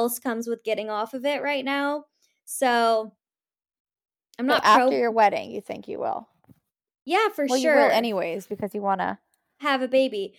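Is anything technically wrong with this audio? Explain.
No, nothing technically wrong turns up anywhere in this speech recording.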